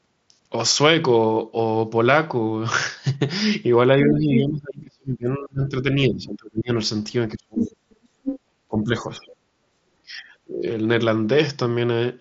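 From 4.04 to 6.7 s the talker's level repeatedly sinks, by as much as about 30 dB, for roughly two seconds in total. This is speech suppressed in double talk, likely because an echo canceller could not separate the two talkers and turned everything down. It differs from a network dropout because the dips follow the other side's activity rather than cutting cleanly to silence.

At 4.1–4.4 s the other side's voice leaks through at about the talker's own level. The likely cause is echo left in the microphone signal after cancellation. Unlike crosstalk, this second voice is coming off a loudspeaker.

Suppression returns at 7.35–7.87 s, dropping by about 35 dB, and leakage appears inside it at 7.59–7.7 s, about 5 dB below the talker. Another leak at 8.23–8.4 s is at a similar level. Further dips follow at 8.69–9.27 s (about 15 dB) and 10.03–10.65 s (about 20 dB). Between them, at 9.26–9.34 s, a faint scrap of leakage sits about 30 dB down.

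All of this rides on a wideband Bluetooth mSBC headset link, whose band stops near 7.7 kHz.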